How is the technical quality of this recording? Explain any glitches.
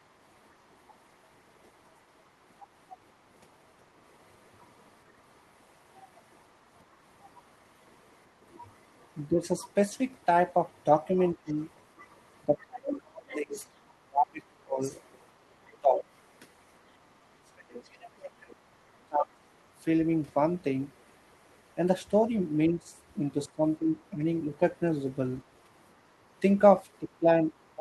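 The recording has two recurring problems: a second voice bleeding in, and the main talker being pushed down when both sides speak.

Other side's voice leaking through, at 2.89 to 5.41 s and again at 9.01 to 17.83 s: a background voice, about 25 dB below the talker at first and then closer, about 15 dB below. The likely cause is a loudspeaker echo that the canceller left in the microphone signal.

Speech suppressed in double talk, at 9.28 to 19.37 s and 22.68 s to the end: the talker dips or cuts out in pieces, by up to about 30 dB and then about 20 dB, totalling roughly three seconds in the first stretch. The likely cause is that the echo canceller, unable to separate the overlapping voices, turned both down.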